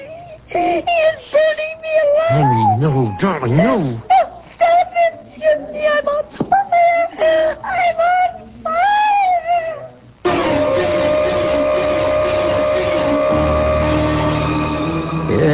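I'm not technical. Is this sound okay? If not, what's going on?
Yes, nothing here needs attention; the sound holds steady throughout with no faults to report.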